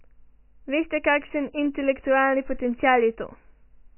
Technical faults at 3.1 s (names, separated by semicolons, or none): MP3 compression